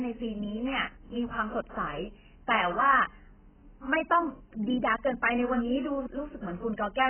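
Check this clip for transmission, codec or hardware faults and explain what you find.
One fault runs through the whole speech clip. Likely AAC compression, AAC-LC at a bitrate near 9 kbps, with nothing above 3.1 kHz: heavy quantisation strips detail, leaving dull, smeared speech with warbling, fizzy sibilants.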